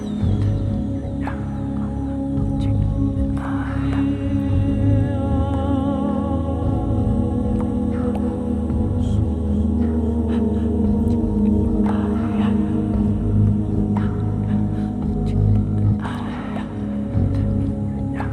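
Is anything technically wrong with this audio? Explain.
No, nothing stood out as technically wrong when listening to this audio.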